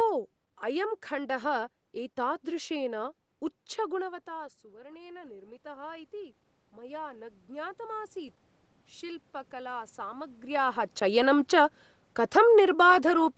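From 4.0 to 8.44 s, automatic gain rising: after the speech input fell by about 18 dB, the gain control gradually added about 10 dB, swelling voice and room noise together.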